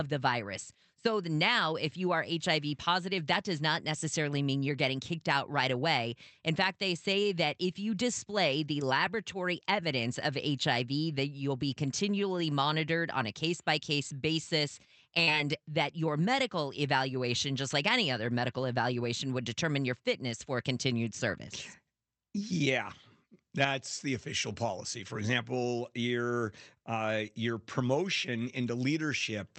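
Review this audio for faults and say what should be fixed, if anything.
Short concealed packet loss at 15.23–15.30 s, after "case by case basis": 40 ms missed the decoder, which continued the preceding sound, leaving a brief smear. A deeper jitter buffer or in-band forward error correction would help prevent this.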